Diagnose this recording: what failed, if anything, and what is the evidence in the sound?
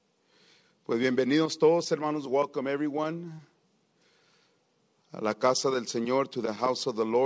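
Nothing failed: the audio has the band limit of a wideband call path, with nothing above 8 kHz, which fits G.722 at 64 kbps, and no defect shows anywhere in the recording.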